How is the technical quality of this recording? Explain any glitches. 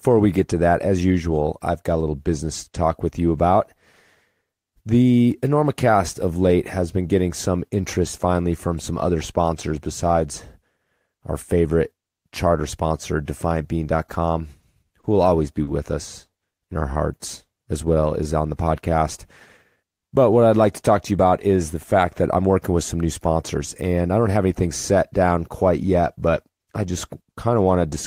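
The recording has timing glitches from network delivery in the middle of this speech clip.

A short stall from a late packet occurs at 15.01 to 15.06 s and again at 15.64 to 15.70 s. Each time the next packet had not arrived, so the jitter buffer ran dry and the receiver held the last sound, for 30 ms and then 40 ms. Nothing is lost, but the sound briefly hangs with a slight buzz or dip.

A jitter buffer slow-down runs from 16.3 to 18.24 s. With its reserve low, the receiver repeated single pitch periods over and over, adding about 103 ms. The speech plays at 95% speed without changing pitch, sounding slightly drawn out.

A jitter buffer speed-up follows from 21.11 to 22.57 s. Holding more audio than it wanted, the receiver trimmed short pitch-period pieces repeatedly, removing roughly 150 ms. Speech runs at 109% speed, same pitch, and sounds hurried.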